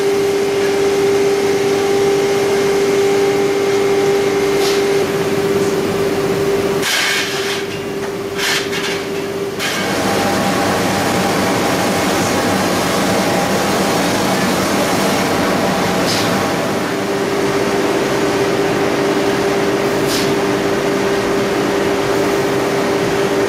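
No technical faults can be heard anywhere in the recording, and the signal holds steady throughout.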